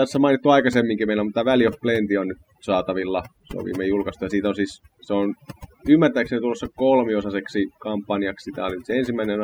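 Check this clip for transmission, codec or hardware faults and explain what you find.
The clip shows one fault, present throughout the speech.

Overdone noise removal, across the whole clip: the noise reduction was pushed too hard, so any frequency band close to the estimated noise level is cut nearly to nothing, taking softer parts of the voice with it. The background drops and breaks up into twinkling specks.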